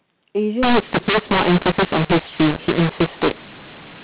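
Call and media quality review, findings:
mu-law and A-law mixed up, 0.63 s to end of clip. Speech turns harsh and gritty, and pauses fill with hiss. Probable component: G.711 decoder reading the mu-law stream as A-law. The mismatched companding curves scramble levels, lifting quiet samples well off zero. Waveform: jagged, uneven peaks, with silences replaced by a raised noise floor. Spectrogram: broadband haze up to the 4 kHz ceiling of the 8 kHz telephone path, and no clean gaps between phrases.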